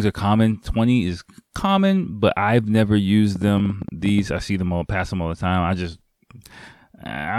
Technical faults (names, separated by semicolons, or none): train of clicks